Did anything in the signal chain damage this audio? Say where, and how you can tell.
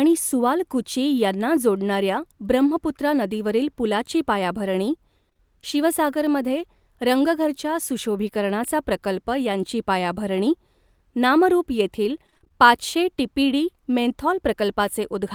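Yes. Short concealed packet loss occurred in the network stage at 5.29, 5.33 and 5.37 s, between "ब्रह्मपुत्रा नदीवरील पुलाची पायाभरणी" and "शिवसागरमध्ये रंगघरच्या सुशोभीकरणाचा प्रकल्प". Each time 20 ms of audio failed to arrive, and the decoder extended the preceding sound to cover it, leaving a brief smeared wobble.

Repeated packet loss with a robotic sound follows from 12.27 to 12.52 s, just after "नामरुप येथील". Seven gaps of up to 20 ms arrive in quick succession, and concealment patches about 44% of the span. The rapid chain of patches makes the sound choppy, with pieces missing.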